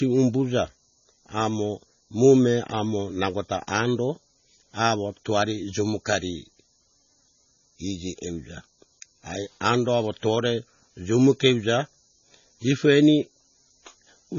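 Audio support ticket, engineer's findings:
Watery, swirly speech throughout, no content above 7 kHz. Likely MP3 compression, heavy, consistent with roughly 24 kbps. Encoder short of bits: treble cut at fixed frequency, weak spectral lines dropping in and out between frames. Sibilants chirp metallic, attacks smeared.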